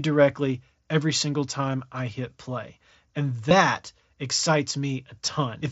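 At 1.72 s, between "every single" and "I hit play", comes concealed Bluetooth headset packet loss. It recurs at 3.49 s and 5.26 s. Each gap is 15 ms, fitting two lost packets. The receiver patched it with repeated recent waveform, heard as a brief buzzy tone with a small warble where real audio returns.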